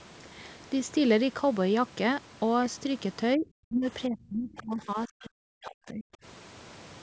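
Speech suppressed in double talk at 3.36–3.46 s, 3.68–3.85 s and 4.08–6.13 s: the talker dips by about 20 dB, then about 25 dB, then sinks by up to about 40 dB for around a second and a half in pieces. Likely, the echo canceller couldn't separate talker from loudspeaker echo and ducked both.

Other side's voice leaking through at 5.22–5.27 s: a brief, faint scrap of a second voice, about 30 dB below the talker, slips in for some 50 ms, likely loudspeaker echo the canceller failed to remove from the microphone.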